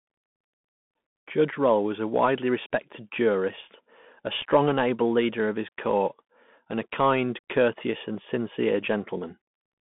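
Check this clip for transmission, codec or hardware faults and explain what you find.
Two faults are present: the whole clip is carried over a Bluetooth CVSD headset codec, and one short dropout comes from unconcealed Bluetooth headset packet loss.

The Bluetooth CVSD headset codec runs from start to end. CVSD codes each sample as a single up-or-down bit, with a step size that adapts, and the audible damage fits a 64 kbps link. The band is limited to roughly 150 Hz to 3.5 kHz, so the speech sounds thin and boxed-in. Fast loud peaks outrun the adaptive step and distort. A grainy hiss sits beneath the voice, and the damage is plainly audible.

Unconcealed Bluetooth headset packet loss occurs at 4.41 s, between "widely respected jurist a" and "and able leader of". About 7.5 ms of audio is missing, which points to a single lost packet on the headset link. Nothing filled the gap. The speech simply stops and restarts with abrupt edges, and the voice comes back quieter for an instant as the CVSD step size rebuilds.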